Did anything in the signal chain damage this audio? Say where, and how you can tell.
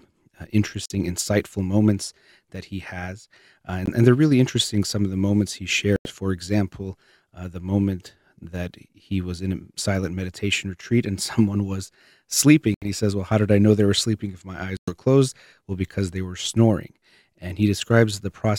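Yes, in the wireless link to playback: packets likely missed their deadline, giving Bluetooth dropouts. The speech cuts to silence at 0.86–0.92, 3.86–3.88, 5.96–6.10, 12.74–12.90 and 14.77–14.93 s, then resumes further along, as though it had kept playing. The first comes just before "insightful moments that he".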